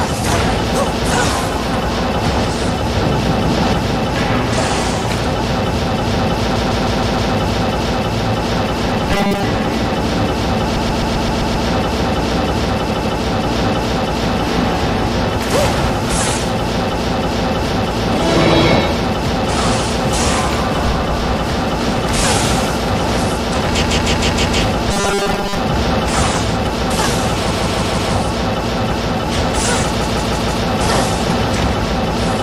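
Starting at 6.55 s, there's a stutter where a short block of about 157 ms plays five extra times, running to 7.33 s. That's repeated frames: a run of compressed frames got written or sent more than once, so the decoder plays the same slice again. The length fits six frames of roughly 26 ms each. The same thing happens at 10.75 to 11.67 s (a 131 ms block played seven extra times), 12.89 to 13.21 s (two extra), 23.81 to 24.60 s (five extra), 27.50 to 28.12 s (four extra) and 30.00 to 30.63 s (four extra). Each one adds between about 0.3 and 0.9 s to the playback time.

From 9.13 to 9.43 s, and again from 24.92 to 25.57 s, the sound turns into a hard, metallic buzz pinned at 200 Hz that only loosely follows what was underneath. That's the robotic sound from repeated short buffers. New audio likely arrived too slowly, so playback kept looping the last 5 ms chunk, which is where the fixed 200 Hz pitch comes from. 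Most of the real audio in those stretches gets skipped.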